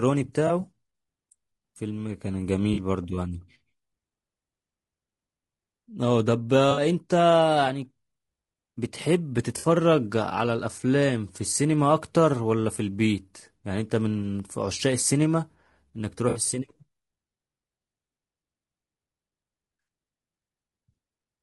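From the start, the speech sounds rough and grainy. Noise fills the gaps between the pitch harmonics, and the top band sounds thin and synthetic. The likely cause is low-delay AAC compression, AAC-ELD, with damage that fits a low bitrate near 32 kbps.

AAC frame loss with concealment strikes at 0.47 s for 20 ms and at 2.73 s for 40 ms. It strikes again at 6.71, 9.57 and 16.29 s, for 60 ms each. The decoder patches each gap from the last good spectrum. Each patch sounds smeared, noisy or phasey.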